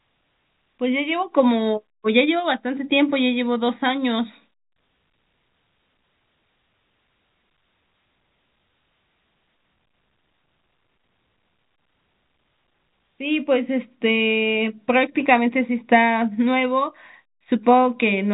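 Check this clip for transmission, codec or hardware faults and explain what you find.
Nothing stood out on listening to this speech; it carries the narrow telephone bandwidth of G.711 coding, with nothing above about 3.8 kHz, and no fault could be heard.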